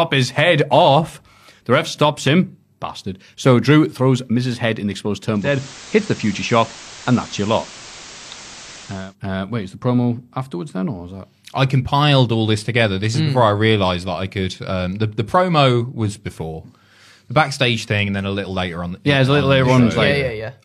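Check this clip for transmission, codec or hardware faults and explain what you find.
There's one fault in this speech. From 5.32 to 9.16 s, just after "in the exposed", the receiver does a digital radio blend to analogue FM: it cross-fades over 370 ms, hiss rises to roughly 20 dB below the speech, and level shifts about 1 dB.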